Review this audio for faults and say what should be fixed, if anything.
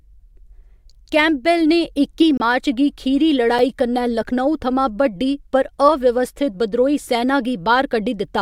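Two blocks of digital silence interrupt the speech: a 26 ms hole from 2.37 to 2.40 s, and a 5 ms dropout at 3.59 s that is heard as a tick. The output jumps straight to zero and back with no fade. This happens when the audio path fails to deliver samples in time, or when a calculation yields invalid values that are replaced with zeros.

To prevent it, give the playback or processing thread enough buffer headroom to avoid underruns, and sanitise invalid values before output.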